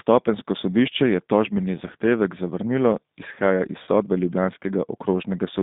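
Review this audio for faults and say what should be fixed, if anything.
Throughout the clip the speech sounds slightly rough and synthetic, with a thin, boxed-in tone: nothing reaches below about 150 Hz or above about 3.7 kHz. This is the G.729 codec damage, and here it is plainly audible. At 8 kbit/s the decoder rebuilds each 10 ms frame from a vocal tract filter, a pitch predictor and a handful of pulses, so fine detail and the upper band are lost. To prevent it, carry the call on a wideband codec such as G.722 or Opus.

From 3.84 to 3.88 s the speech briefly smears into a stretched sound that drops in level, and it stays weak or distorted for a moment afterwards. This is VoIP packet loss concealed by the speech codec. About 30 ms of audio went missing, which fits three lost 10 ms frames. The decoder filled the gap by repeating its last pitch and filter at falling gain, and because each frame builds on the one before, recovery lags behind the packets' return. 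To prevent it, reduce network loss with QoS prioritisation and a suitably sized jitter buffer, or add forward error correction.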